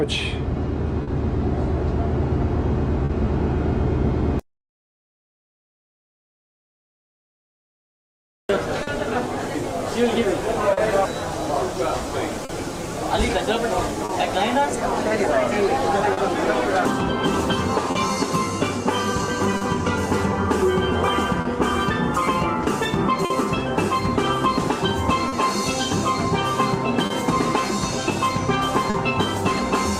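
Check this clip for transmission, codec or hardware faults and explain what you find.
Four kinds of transmission fault are present. All of them come from the network path and its jitter buffer. None points to a codec or hardware problem.

Clock drift between sender and receiver runs through the whole clip. The sender's clock is roughly 2% slower than the receiver's. The buffer keeps draining, so the receiver must stretch or repeat material. Small, uneven timing hiccups recur from start to finish.

A short stall from a late packet occurs twice, at 1.03–1.10 s and 3.05–3.12 s. Each time a packet arrived about 40 ms late. The buffer ran dry, and the receiver held the last sound for 40 ms before resuming. Nothing is lost. The sound just lingers briefly with a faint dip.

Repeated timing corrections span 4.43–8.31 s. Playback runs at 98% speed here, adding about a tenth of a second in total. 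The receiver repeats tiny slices to keep pace with the slow sender. These come unevenly spaced.

Scattered short gaps appear between 8.83 and 28.97 s. There are roughly ten, the longest around 50 ms, with about half a second patched overall. Each lost or late packet was covered by continuing the previous sound. The result is brief ticks and smears.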